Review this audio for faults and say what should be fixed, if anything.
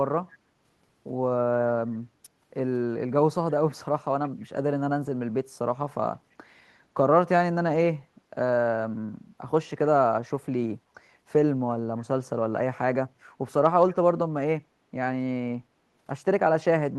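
Echo leak occurs at 4.28–4.45 s and 13.9–13.94 s. A faint copy of the speech arrives 310 ms late, roughly 30 to 35 dB below it. It likely comes from a far-end loudspeaker whose echo canceller let residue through. On a spectrogram it appears as weak, smeared repeats of the preceding harmonic bands, shifted 310 ms later. On the waveform it is a low-level tail after the louder speech. Better acoustic echo cancellation at that end, or a headset there, would prevent it.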